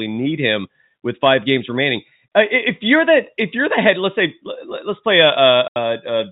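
Telephone-band speech, limited to about 4 kHz as G.711 coding would leave it, has hard clipping at 1.24–1.55 s, 3.79–3.90 s and 5.15–5.51 s. Peaks overdriven by about 4 to 5 dB are cut flat, producing crackle on peaks. At 5.68–5.76 s, packet loss filled with silence leaves an 80 ms hole with hard edges, which fits four lost 20 ms packets.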